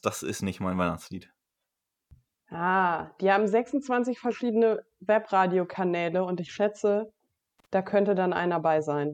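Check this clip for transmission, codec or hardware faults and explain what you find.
A hardware fault appears once, right after "und ich schätze": loose connector crackle from 7.59 to 7.66 s. A worn or dirty contact is briefly making and breaking, chopping the signal and jolting any DC on the line, so the speech gets a short, irregular burst of scratchy crackle.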